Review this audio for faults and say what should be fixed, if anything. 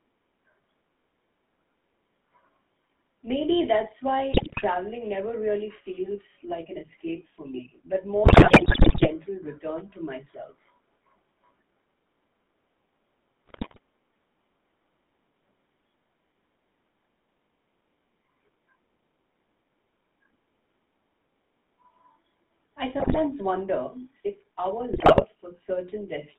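The whole recording carries GSM full-rate codec damage: a buzzy, gravelly roughness and a line band of roughly 200 Hz to 3.6 kHz, which fits 13 kbps full-rate coding. Modelling the vocal tract with sparse, regularly spaced pulse excitation strips detail, so the voice sounds coarse. Capture over a wideband or higher-bitrate path instead.

GSM bit errors appear as squawks, pops and gargling at 4.32–4.64 s, 8.24–9.09 s (between "escape for me but" and "return to myself"), 13.46–13.79 s, 23.00–23.20 s (just before "wonder if our") and 24.92–25.24 s (just after "wonder if our"). Corrupted filter, pitch and gain values distort the spectrum or level frame by frame, at error rates of about 5 to 11 percent. Improve link quality or apply error concealment.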